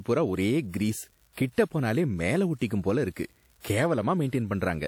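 A steady crackle runs through the whole speech clip, pauses included. This is an unreliable data bit. One data line is marginal, so its bit flips in a random share of samples. Each flip adds a spike of the same size.

Pre-echo appears at 1.33 s, 1.53 s and 3.61 s. A short hiss comes before each attack, lasting 41 ms, 46 ms and 36 ms. The codec spread its block's noise into the quiet lead-in. The attacks sound smeared.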